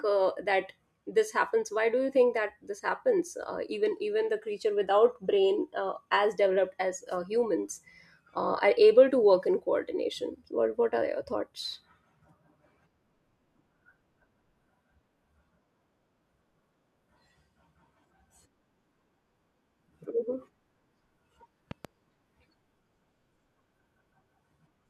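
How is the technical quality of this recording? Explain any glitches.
The recording has one clear glitch. From 21.71 to 21.87 s, a loud pop comes as two sharp thumps a little above the speech, likely from a voltage pulse such as a switch or static discharge. They show as two tall waveform spikes and thin broadband vertical stripes on a spectrogram, with the speech continuing underneath.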